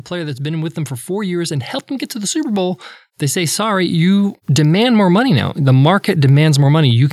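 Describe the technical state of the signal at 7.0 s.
At 7.0 s the speech signal is intact, with no audible technical fault at that moment.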